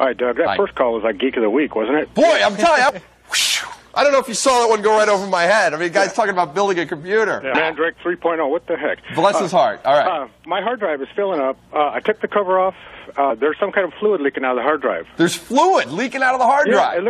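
The audio has three brief glitches from damaged data in a compressed stream, at 2.89–2.91 s, 7.54 s and 13.29–13.31 s. Corrupted bytes made the decoder misread those frames and lose sync until it found the next valid frame header.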